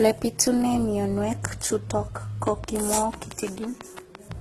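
From the start, the speech sounds smeared and watery, with a swirly, warbling texture layered over a brittle, metallic sheen, and nothing above 12.8 kHz. These are two different sets of compression artefacts heard together, which points to transcoding between lossy codecs. The likely chain is a low-rate Opus encode, around 12 kbit/s, followed by HE-AAC at around 24 kbit/s. The second encoder wastes bits on the first one's damage and adds its own, and the lowest cut-off in the chain remains.

Right after "pitune mionwek chutok ko", at 2.48 s, a train of clicks begins and runs to 4.33 s. It is a steady ticking of about ten sharp, similar pops, spaced evenly at about six per second. They stand out roughly 10 dB above the speech and are plainly audible in the gaps as well as over the talking. Such a regular pulse train is likely caused by interference from nearby equipment or a faulty connection.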